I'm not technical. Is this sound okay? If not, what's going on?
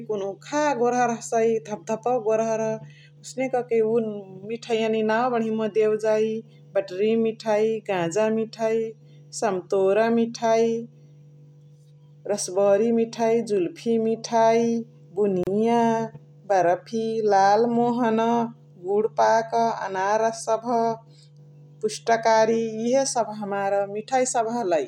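No, there's a gap at a join of encoded pieces: at 15.43 to 15.47 s the speech briefly cuts to silence for about 34 ms, where two separately saved chunks were stitched together.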